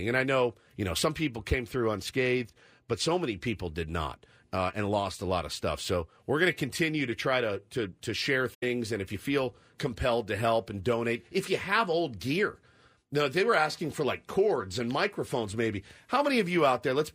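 At 8.54 to 8.63 s, just after "to to to share", AAC frame loss with muting leaves a soft-edged 85 ms hole, consistent with four lost frames.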